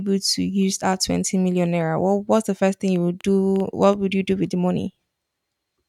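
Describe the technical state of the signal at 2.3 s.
The signal at 2.3 s is intact, with no audible fault at that moment.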